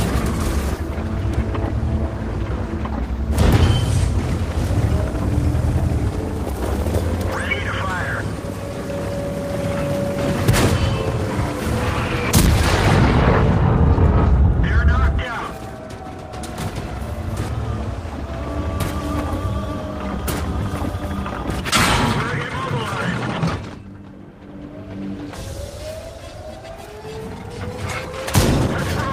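No technical faults can be heard anywhere in the audio; the signal holds steady and continuous throughout, with no dropouts, distortion or level disturbances at any point.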